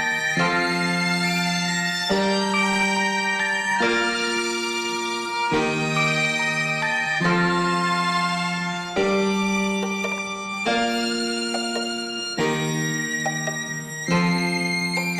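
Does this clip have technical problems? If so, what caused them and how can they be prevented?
Yes. Throughout the clip the audio was read two samples at a time, so each pair of samples was taken as a single frame. The sound therefore plays at 2.0 times speed and an octave high. To prevent it, declare the true channel count and sample width when opening the stream.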